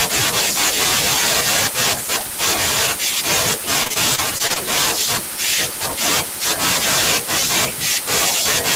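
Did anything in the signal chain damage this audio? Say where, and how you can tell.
Yes: network stage, 3.83 to 4.58 s, repeated packet loss (robotic sound). Seven short gaps, longest 24 ms, patched by stretching prior sound, give choppy speech with pieces missing, not steady codec smearing.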